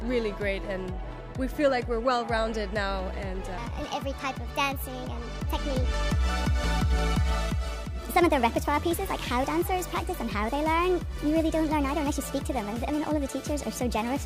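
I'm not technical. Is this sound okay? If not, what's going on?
No. From 3.58 s to the end, the sound plays 1.34 times too fast and about five semitones higher: a section at the wrong speed, likely from playback on the wrong clock.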